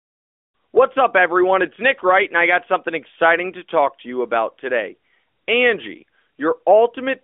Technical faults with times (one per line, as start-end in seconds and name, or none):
none